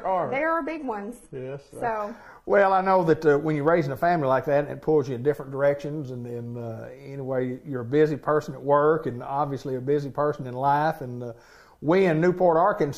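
From 0 to 2.0 s an adaptive stream starting at a low bitrate sounds band-limited near 11.8 kHz, fitting 16 kbit/s HE-AAC, then improves suddenly at 2.0 s without any gap, unlike a rebuffer.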